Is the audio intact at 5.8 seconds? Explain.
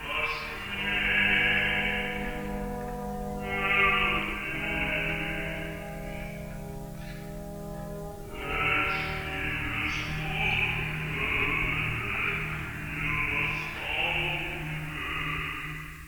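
Yes, the audio is intact at 5.8 seconds, with no dropout, click, distortion or other fault at that point.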